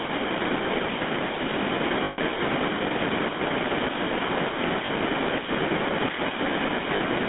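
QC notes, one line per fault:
Throughout: GSM full-rate codec. The speech has a plainly audible buzzy, gravelly roughness, with the band limited to about 200 Hz to 3.6 kHz. The vocal tract is rebuilt from a coarse pulse excitation, and that texture fits the 13 kbps GSM full-rate codec.
2.04–2.19 s, 4.86–4.89 s, 6.96–7.01 s: lost GSM frames. Each gap rings with a rough, metallic hold instead of clean speech. It is longest at 2.04 s, about 140 ms, which fits seven missing frames. The settings of the last good frame are reused to cover each loss.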